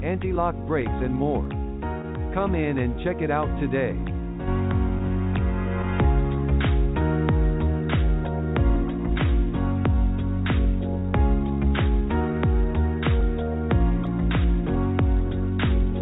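Through a narrowband call path that leaves nothing above 4 kHz (the coding noise fits G.711 A-law at 64 kbps), the audio carries clock drift between sender and receiver: the sender's clock runs roughly 1.5% slow, so the jitter buffer keeps draining and the receiver must stretch the stream to stay fed. On a waveform this shows as a gradual lag against the original timing rather than any single visible break. The stretching takes the form of repeated timing corrections from 0.13 s to 15.92 s. The receiver repeats short pieces at uneven intervals, all in the same direction, so playback runs at about 99% speed and gains around 200 ms over the stretch. It is heard, if at all, as faint hiccups or a slightly unsteady tempo. On a spectrogram these appear as tiny, irregularly spaced seams where a sliver of texture recurs. Two sharp clicks at 1.45 s and 14.07 s are most likely dropped samples, about four samples each, roughly 0.07 ms lost. 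The waveform jumps abruptly from one value to a later one, and a spectrogram shows each as a thin vertical line up to the 4 kHz ceiling.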